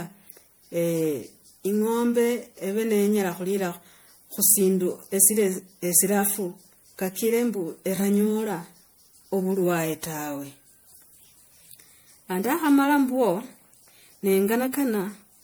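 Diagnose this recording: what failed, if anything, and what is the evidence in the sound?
Codec stage: the speech sounds swirly, hollow and smeared for its whole length, with softened consonant attacks, most likely generation loss from around five rounds of lossy re-encoding, which fits a 96 kbit/s MP3. Each pass requantises on a shifted frame grid, so holes accumulate. A spectrogram shows speckled, patchy gaps and nothing above 20.9 kHz.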